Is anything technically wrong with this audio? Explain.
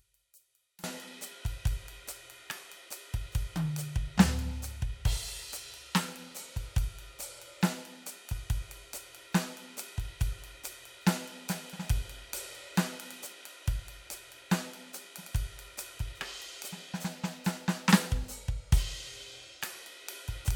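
Yes. From 0.0 to 0.84 s the music drops by about 28 dB, its centre gone. The likely cause is one channel inverted: material shared by both channels cancels in mono. A faint residue remains, not the silence of a dropout.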